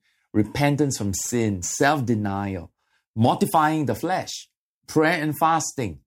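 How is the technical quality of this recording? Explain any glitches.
The recording has one clear technical fault: sample clock jitter between 1.08 and 3.82 s of the speech. During that stretch the converter's timing wobbles by a few microseconds, so each sample is captured slightly off its proper instant. Where the waveform changes fastest, that timing slip becomes an amplitude error roughly 30 dB below the signal. The result is a grainy hiss that swells on loud, bright syllables and disappears in pauses. A steady background hiss would stay audible in the gaps instead.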